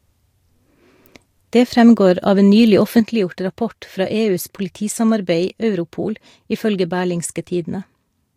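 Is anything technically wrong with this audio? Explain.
Yes, there is a sudden gain jump in this speech. At 3.0 s, right after "fremgår av en nylig", the level drops by about 6 dB in a single step and stays there to the end. The likely cause is a digital gain setting applied instantly, without a ramp. The speech and the background noise fall together, so the noise floor steps down too. On the waveform the envelope halves abruptly, and a spectrogram shows a vertical boundary where every band darkens at once.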